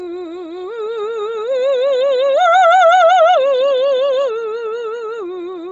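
The clip is music, and the same fault runs through all of it. Nothing is audible above about 7.7 kHz, so the top octave is gone and the sound is dull. What remains in the upper band has a grainy, breathy texture. The damage is heavy. This is likely Bluetooth LC3 compression at a low rate. The codec discards much of the upper spectrum and patches it with noise. The sound points to roughly 24 kbps with short 7.5 ms frames.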